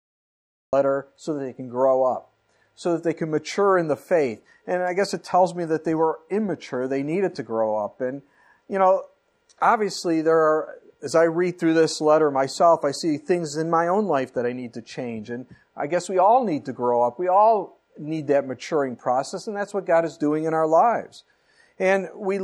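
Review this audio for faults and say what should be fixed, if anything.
Cut-off start: late capture leaves digital silence until 0.73 s, then sound appears mid-event, a jump from flat zero and a hard vertical spectrogram edge. Start recording a moment before the source begins, or enable pre-roll buffering, so the opening attack is captured.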